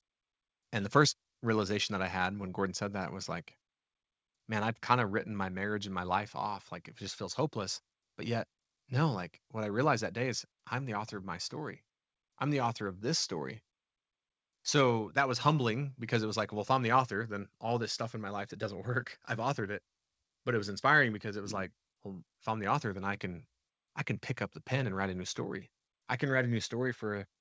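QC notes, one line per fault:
Nothing to flag on this one: it's speech that came over a call link, with nothing above 8 kHz, which fits a G.722 wideband codec at 64 kbps.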